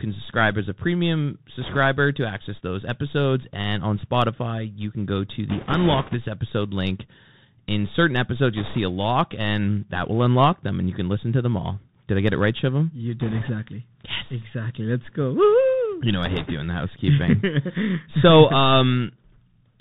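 Throughout the speech, the Bluetooth CVSD headset codec, which fits a 64 kbps link, leaves nothing above 4 kHz. On a spectrogram this shows as a hard ceiling. The one-bit up-down coding lays a granular hiss under everything, and s sounds come out scratchy where the adaptive step cannot keep up.

Bit errors on the Bluetooth voice link strike at 1.61–1.77 s (between "subscribe as a premium" and "to access those episodes"), 5.49–6.15 s (between "you can go to" and "episode link"), 8.57–8.79 s (between "certain episodes" and "a lock and that"), 13.21–13.50 s and 16.26–16.53 s. Flipped bits at an error rate of a few percent add a rushing crackle without loud clicks. In the waveform this shows as a thickened noise floor rather than spikes, and on the spectrogram as broadband speckle below 4 kHz.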